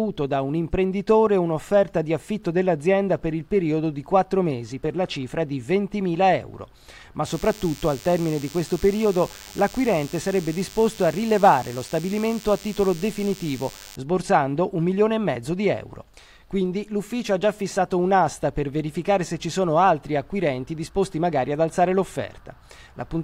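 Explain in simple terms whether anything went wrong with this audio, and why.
From 7.27 to 13.96 seconds a thin, steady buzz sits underneath the sound, quieter than the main audio. This is DECT cordless phone buzz: a nearby cordless phone pulses radio bursts 100 times a second, and the audio electronics turn those pulses into an audible hum.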